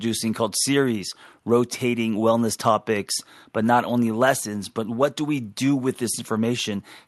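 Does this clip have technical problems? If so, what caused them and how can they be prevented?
No, there are no technical problems to fix in this speech clip. It has come through a WebRTC call path, and the top end stops at about 12 kHz, which fits an Opus connection set to that bandwidth.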